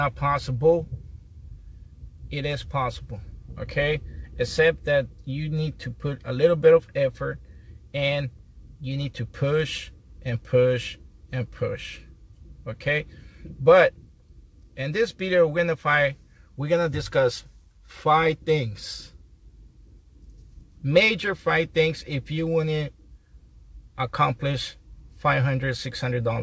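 No faults are audible; the call path behaves as expected, with nothing above 8 kHz, which fits a wideband codec such as G.722 at 64 kbps.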